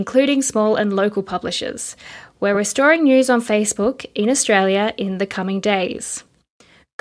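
Speech recording with no audible technical faults.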